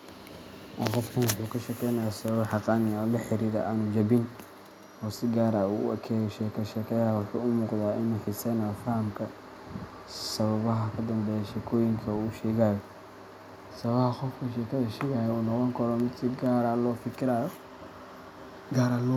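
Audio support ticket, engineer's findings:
No faults found on listening; the speech shows no dropouts, glitches or other defects attributable to capture, processing or playback.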